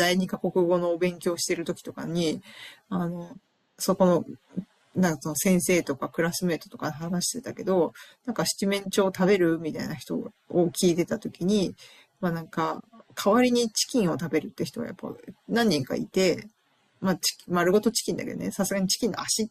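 No dropouts, distortion, timing errors or other technical faults are audible anywhere in the recording.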